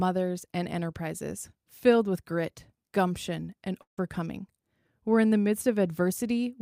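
Speech, with a likely long network dropout at 3.81–3.98 s, just after "with grit gumption and". A fading buzz replaces the lost sound, then about 110 ms of silence follows. On a spectrogram, smeared harmonics decay into a blank band, and the waveform tapers to a flat line.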